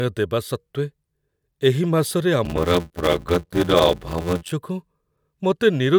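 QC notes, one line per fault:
2.45 to 4.51 s, block size mismatch (padded). Each block arrives short and ends in silence. This chops the speech into a buzz at 86.1 Hz, which fits a 512-sample block. The speech also slows to 0.625 times normal speed, with timbre unchanged.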